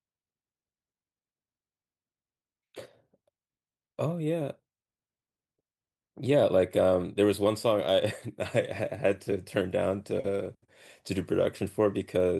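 No technical faults are audible.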